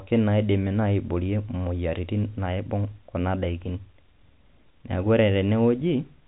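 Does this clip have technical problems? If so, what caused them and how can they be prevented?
No, the speech shows no technical problems; it carries the narrow band of G.711 telephone coding, with nothing above about 3.9 kHz, which fits 64 kbps A-law telephone audio.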